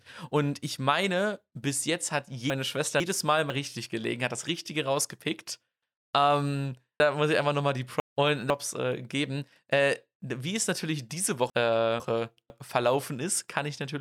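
Speech, with three spots where the audio comes out jumbled because chunks play out of order. At 2.5 to 3.5 s, after "meine bis jetzt hat", a 500 ms chunk arrives one chunk late; at 7.0 to 8.5 s, before "äh geben", one is two chunks late; at 11.5 to 12.5 s, after "wie es natürlich diese", one is again one chunk late. Nothing is missing, but each misplaced chunk leaves three hard joins.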